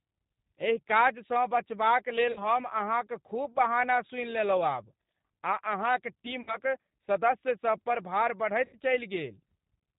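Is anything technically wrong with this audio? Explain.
Yes. The whole speech clip runs through a G.729 codec at 8 kbit/s, and the damage is plainly audible: the voice is rebuilt from a vocal tract filter, a pitch predictor and a few pulses per frame, with nothing above 4 kHz, so it comes out band-limited, a bit rough and synthetic.

There's also VoIP packet loss concealed by the speech codec in three places: 2.32 to 2.48 s, just before "अहाँक खूब बहाना सूनि" (about 40 ms lost); 6.41 to 6.59 s, right after "आ अहाँक" (about 60 ms); and 8.65 to 8.78 s (about 80 ms). The decoder stretches the last pitch and filter into a fading buzzy tone or coloured noise, and the voice stays weak briefly after packets resume.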